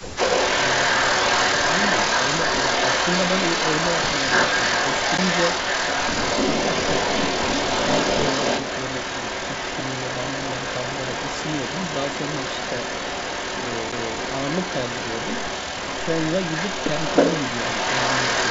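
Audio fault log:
throughout: echo leak. A second copy of the speech trails the original by about 0.3 s for the whole clip, and it is about 5 dB louder than the direct sound. The likely cause is a far end playing the call over a loudspeaker, where the echo canceller failed to remove what its microphone picked up and sent it back. Unlike room reverb, which smears into a smooth decaying tail, this is a distinct, discrete repeat at a fixed delay.
5.18 s and 13.92 s: CD skip. At each point there is a brief tick and a mute of 10 ms or less, after which the speech resumes from a different point. The laser has jumped to another turn of the disc's spiral, so playback continues out of sequence rather than where it stopped. That break in continuity distinguishes it from a simple network or buffer dropout, where the sound goes silent but picks up again in the right place.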